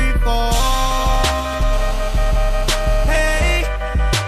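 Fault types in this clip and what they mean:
GSM phone buzz: a raspy 216.7 Hz buzz rich in harmonics, unrelated to the sound, runs from 1.73 to 3.53 s at about 18 dB below the signal. A nearby 2G phone on a call transmits in bursts, which the audio circuitry rectifies.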